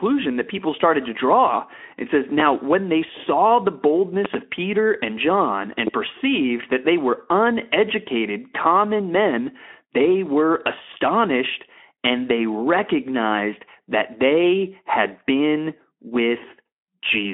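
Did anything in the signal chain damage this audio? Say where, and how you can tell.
Yes. Loud pops hit the analogue wiring stage: a double pop at 4.25 to 4.37 s and a single one at 5.87 to 5.90 s, about 15 dB above the speech. These are likely voltage steps from a plug or switch.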